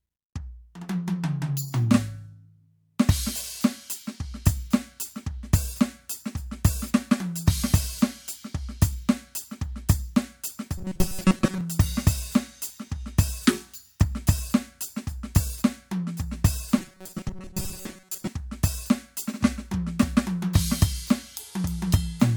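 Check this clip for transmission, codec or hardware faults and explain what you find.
The music has two stretches of robotic sound from repeated short buffers, from 10.78 to 11.61 s and from 16.78 to 18.27 s. The music hardens into a rigid, metallic buzz fixed at 188 Hz that loosely follows the sound. The likely cause is audio arriving too seldom, so a fragment of about 5.3 ms is replayed in a loop while most of the real audio is skipped.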